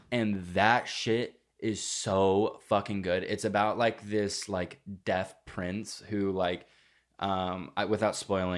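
Nothing in this speech recording points to a technical fault: the signal holds steady throughout, with no interruptions, level problems or damage to be heard.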